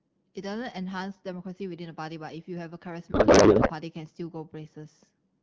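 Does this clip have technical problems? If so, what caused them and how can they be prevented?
Yes. From 3.11 to 3.71 s there is a codec payload misread: the AMR wideband frames were packed in octet-aligned form but unpacked as bandwidth-efficient, so every field lands a few bits off and the decoder builds garbled noise and warble that barely follows the speech. On a spectrogram the harmonic striping collapses into smeared, structureless energy for that stretch, and the waveform envelope stops tracking syllables. Around it, the 12.65 kbit/s AMR-WB speech is clear. Prevention: make both ends negotiate the same octet-align setting in the session description.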